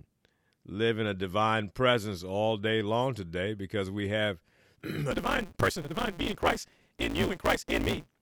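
From 5.11 s to the end, a block size mismatch (truncated) discards each block's tail, adding a 172 Hz buzz, consistent with 256-sample reads, while speech runs 1.88 times faster with its timbre intact.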